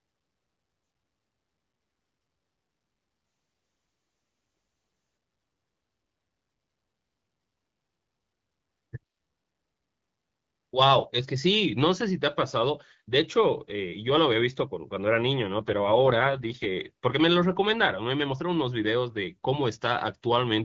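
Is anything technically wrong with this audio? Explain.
Yes. Twice the speech, carried over AMR wideband, turns rough and synthetic. This is an AMR rate drop, from 3.23 to 5.17 s and again from 15.58 to 16.66 s. A weak link pushed the codec to spend bits on error protection. The raspy texture fits a fall from 12.65 to 6.6 kbit/s. The waveform shows no gap and the spectrogram's top band edge holds, but harmonics blur into noisy smears until the rate recovers.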